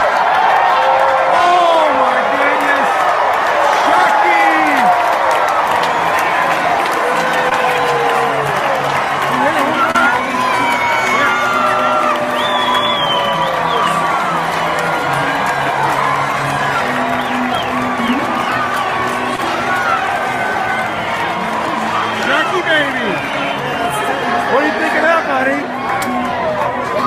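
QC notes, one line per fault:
7.49–7.53 s, 9.91–9.96 s, 19.36–19.40 s: short concealed packet loss. Each is a brief smear or wobble. Roughly 20 ms of audio never arrived and was patched by extending the preceding sound, then blending back.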